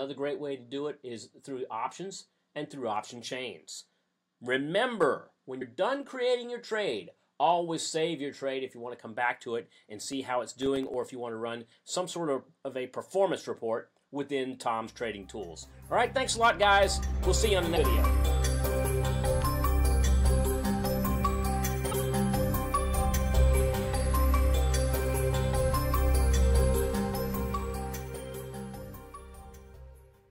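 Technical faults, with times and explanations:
5.03 s and 6.03 s, dropped samples: each moment is a single sharp click, a hair-thin tick with no audible gap. The waveform jumps abruptly from one value to a later one, and that step in level produces the click. The missing stretch is tiny, roughly a fifth of a millisecond each time, which likely means a few samples went missing from the stream. The loss is far too short to take away any sound.
5.60 to 5.62 s, compressed frames skipped: the sound lurches forward with a brief smeared blip, not a hard click. About three frames of the encoded stream never played, which fits a 26.1 ms frame length and comes to roughly 70 ms of audio gone. The decoder overlaps each frame with its neighbours, so the join is blurred into a soft glitch instead of a sharp edge.
10.12 to 11.03 s, processor overload crackle: a gritty, tearing crackle rides on the sound for just under a second, then stops. 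The processor repeatedly failed to fill its small audio buffers in time, about ten misses here. Each one fits a buffer of roughly 1.5 ms and left a short hole of silence with hard edges. Scattered through the stretch, these tiny dropouts merge into a rough texture.
17.75 to 17.78 s and 21.91 to 21.93 s, broken MP3 bit reservoir: each is a short glitch, about 30 ms long, where the sound skips ahead. After a cut in the stream, the next 26.1 ms frame went looking in earlier frames for the bits it had borrowed there and likely found another frame's data instead. Decoding those wrong bytes garbles the first frames after the cut before clean frames resume.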